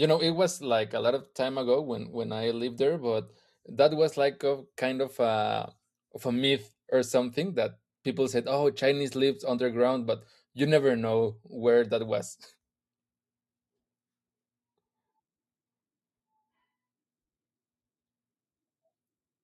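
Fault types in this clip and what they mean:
No technical faults are audible.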